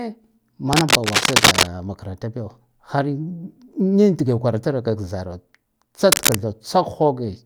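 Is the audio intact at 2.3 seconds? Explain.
Yes, at 2.3 seconds the speech runs through intact, with no dropout, click, distortion or other fault audible at that point.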